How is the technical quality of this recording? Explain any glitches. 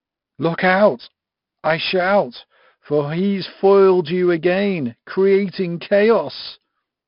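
Pretty rough, honestly. The speech carries heavy 4-bit ADPCM compression from start to finish. Each sample is coded as a coarse 4-bit step off a prediction, so gritty hiss rides on every loud syllable and sharp attacks smear. Nothing above 5.3 kHz survives, pointing to a low sample rate near 11 kHz and a bitrate of about 44 kbps.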